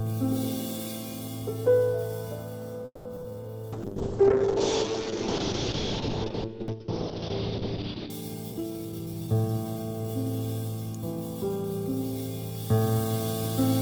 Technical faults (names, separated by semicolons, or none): repeated packet loss (robotic sound); jitter buffer slow-down; call bitrate drop; jitter buffer speed-up; electrical switching spike